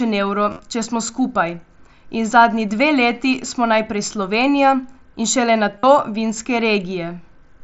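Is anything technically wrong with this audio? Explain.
Yes. There is concealed Bluetooth headset packet loss, heard three times. The first is 0.50 to 0.59 s, just before "če smo skupaj". Losses there are scattered over 90 ms, with the longest run 37.5 ms. The second is 2.68 to 2.71 s, between "in zadnji" and "dve leti smo najprej". The third is 5.79 to 5.83 s. Packets dropped on the headset link, so the receiver filled the gaps by repeating recent waveform. Short gaps pass almost unnoticed. Longer runs give a brief buzzy hold and a slight warble as the speech resumes. The mSBC wideband link carries the audio.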